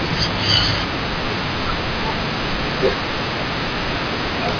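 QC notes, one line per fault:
No faults heard anywhere in this speech recording.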